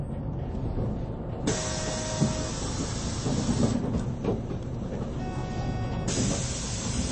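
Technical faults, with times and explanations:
Throughout, MP3 compression: nothing sounds above 8.3 kHz, and what remains is plainly watery and swirly as weak frequency lines drop in and out between frames. This likely comes from a bit-starved encoder at around 32 kbps. A plain low-pass filter would lack the swirl.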